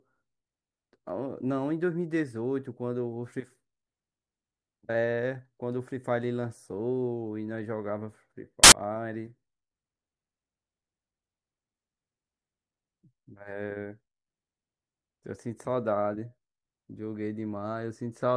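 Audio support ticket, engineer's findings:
Burst of very loud white noise, 8.64–8.72 s, hard edges. File tags played as audio: embedded cover picture's compressed data decoded as samples by the reader.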